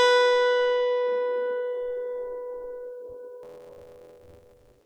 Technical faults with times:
3.42-4.85 buffer tearing

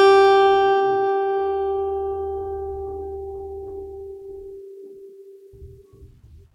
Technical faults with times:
0.25-6.16 clock slip clicks

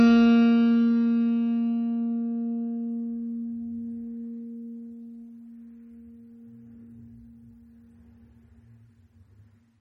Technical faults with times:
0.00-9.81 MP3 compression

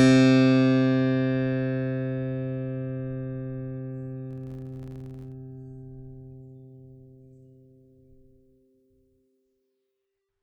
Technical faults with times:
4.31-5.34 filter restarted on every block

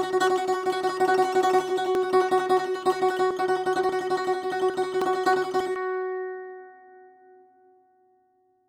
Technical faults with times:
1.95 dropped buffer (overrun)
5.02 dropped buffer (overrun)
5.76 dropped buffer (overrun)

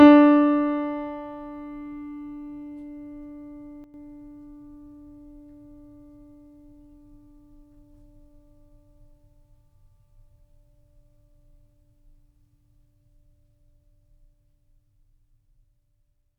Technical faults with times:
3.84-3.94 sudden gain jump

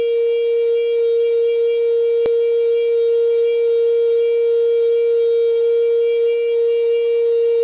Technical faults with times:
2.26-2.28 skip ahead
2.35-3.52 jitter buffer speed-up

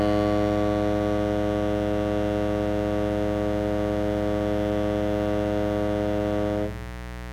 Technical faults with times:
0.00-7.33 mains buzz

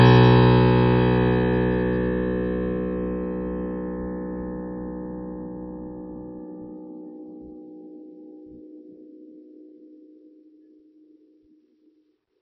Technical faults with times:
0.00-12.42 MP3 compression

